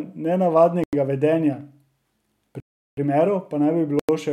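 Three blocks of digital silence: 0.84 to 0.93 s, 2.60 to 2.97 s just before "primerov pa naj", and 3.99 to 4.09 s right after it. The audio cuts to silence and back with no fade. The lengths fit 4096- and 16384-sample blocks.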